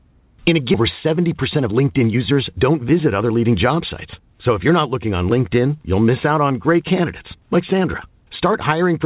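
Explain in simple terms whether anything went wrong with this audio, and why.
At 0.74 to 0.76 seconds there is a skip ahead: roughly 0.7 seconds of speech was dropped, and playback jumps straight to later audio with no gap. From 0.84 to 3.23 seconds a jitter buffer speed-up follows. The receiver had too much audio waiting, so it trimmed tiny pieces to catch up. Speech runs about 10 percent faster at the same pitch and loses roughly a fifth of a second. The call path itself carries nothing above 4 kHz.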